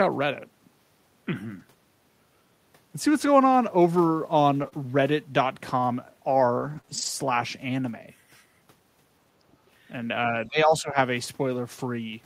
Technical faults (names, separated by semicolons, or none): lost packet rebuilt from error correction; scattered short gaps; speech suppressed in double talk